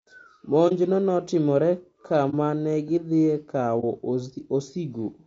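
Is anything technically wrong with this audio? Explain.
Yes. There are two problems, one running through the whole recording and one recurring.

Throughout, the speech sounds rough and grainy, consistent with low-delay AAC compression, likely AAC-ELD at a bitrate that fits around 32 kbps. Its short frames separate pitch harmonics poorly, so a spectrogram shows noise filling the gaps between harmonic lines and a smeared upper band.

At 0.68 to 0.72 s, 2.30 to 2.35 s and 3.80 to 3.84 s, AAC frame loss with muting leaves brief holes where about 30 ms of audio was zeroed. Overlapping windows taper the edges, so the waveform shows soft fades down to silence without clicks, and the spectrogram shows narrow vertical blank strips.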